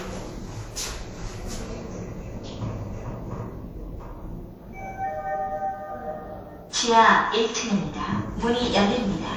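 Everyday sounds carry layered artefacts from different codecs heard together throughout, with content reaching about 20 kHz, likely from transcoding between lossy codecs, suggesting HE-AAC re-encoded to WMA.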